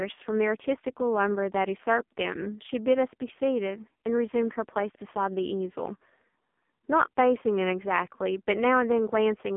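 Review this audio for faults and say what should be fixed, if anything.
The AMR narrowband mobile codec shapes the speech for the whole clip. The line passes roughly 200 Hz to 3.5 kHz, with nothing above 3.6 kHz, and the vocal-tract model rebuilds each 5 ms from a few pulses, so the voice comes out heavily buzzy and synthetic. That degree of damage fits a low mode of about 5.9 kbps. A simple telephone band-limit would be equally dull, but it would not have this artificial, pulse-driven grain. To prevent it, record or route the call over a wideband or higher-bitrate path instead of narrowband AMR.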